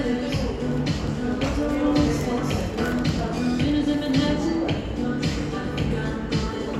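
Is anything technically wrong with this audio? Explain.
No, nothing technically wrong turns up here; these sounds come across just as they should, with no faults to point to.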